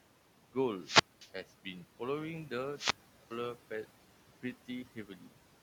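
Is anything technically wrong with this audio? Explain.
Yes. Three kinds of fault are audible in this speech clip.

Noise suppressor artifacts run through the whole recording. The suppressor estimates the steady background and pulls down each frequency band it judges to be noise, frame by frame, by about 12 dB here. The room noise, which sits about 17 dB below the speech, therefore sinks in the pauses and swells back under the voice.

Two wireless microphone squelch dropouts occur, at 0.76–1.32 s and 2.73–3.36 s. In each, the analogue FM link's signal fades far enough that the receiver's squelch mutes the output. The sequence is a short rise of hiss or static, then a near-silent hole of about 220 ms in the first event and about 400 ms in the second, before the voice returns.

Speech cut by the noise suppressor appears at 4.85–5.33 s. Here the suppressor mistook part of the speech for background and attenuated it along with the noise, by up to about 11 dB. 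Only part of that half-second span is affected, roughly a fifth of a second in total. Those portions sound swallowed and faint, as if soft consonants or word endings had been shaved off.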